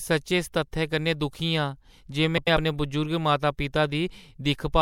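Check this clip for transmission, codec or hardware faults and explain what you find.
There is one fault in this speech clip, a case of frames out of order, between 2.37 and 2.57 s. Two adjacent blocks of about 96 ms each, four frames per block, were swapped before decoding, so the roughly 0.2 s stretch plays its second half before its first. The result is a brief garbled flutter. Nothing is missing, and the timing after the stretch is unchanged.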